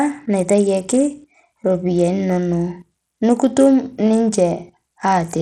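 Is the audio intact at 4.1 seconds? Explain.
No. Throughout the clip, including 4.1 s, the speech carries plainly audible gritty, flickering treble and nothing above 18.2 kHz, likely Bluetooth SBC compression, fitting roughly 80 kbps. Its coarse, uniform sub-band quantisation sounds harsher and grainier than a plain low-pass cut.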